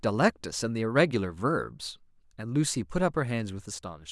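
No technical faults can be heard anywhere in this speech recording. There is nothing to place on a timeline here.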